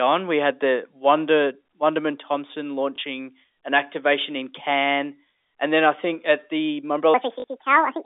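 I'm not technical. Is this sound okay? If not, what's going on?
No. Two things went wrong.

First, packet loss with the last packet repeated: at 2.96 to 2.98 seconds one short chunk of audio never arrived, and again at 7.40 to 7.44 seconds two chunks in a row went missing. Each time, the receiver filled the gap by replaying the chunk it already had. You hear a small blip or a robotic little stutter, slightly longer the second time.

Second, a section at the wrong speed: right after "I think at the", from 7.14 seconds to the end, the audio runs about 1.6 times too fast, most likely because it was played back against the wrong clock. The speech turns hurried and squeaky, roughly ten semitones higher.

The ordinary telephone-line sound comes from normal phone coding, not from these faults.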